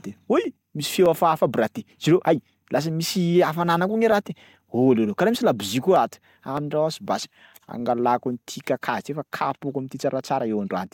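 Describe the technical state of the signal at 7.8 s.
Clock drift buffer slips, 0.44 to 10.87 s: a regular click every 0.61 s, likely from two clocks about 500 ppm apart dropping or repeating small sample blocks.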